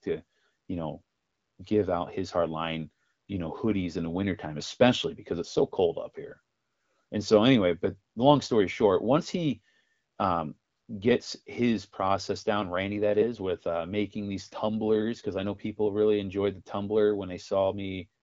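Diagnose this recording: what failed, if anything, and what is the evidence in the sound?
Nothing failed: the speech has passed through an AMR wideband (HD Voice) codec at 12.65 kbit/s, which accounts for its light coding texture and for the empty band above 7.6 kHz.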